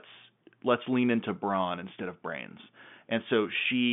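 No faults are audible: the speech sits in a telephone band of about 150 Hz to 3.5 kHz with nothing above 3.7 kHz, which is what normal G.711 telephone coding produces.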